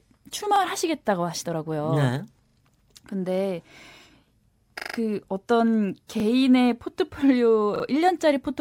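Repeated buffer stutters occur at 0.56, 2.48, 4.8, 6.2 and 7.76 s. Late-arriving audio makes the device replay a 40 ms segment, which fits a 40 ms buffer. The segment sounds twice, three, five, twice and three times respectively, with hard joins that give a short mechanical stutter in the speech.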